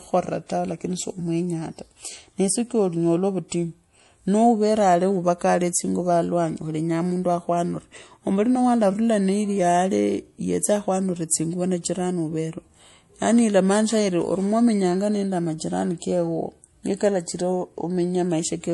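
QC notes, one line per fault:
Throughout: MP3 compression, plainly audible. Nothing remains above 11.5 kHz, so the speech loses its air and the s sounds come out dull and metallic. A watery, swirling texture runs under the sound as weak frequency components drop in and out from frame to frame. The likely cause is an MP3 encoder short of bits, cutting the top band outright and zeroing quiet detail. The damage fits a low bitrate around 48 kbps.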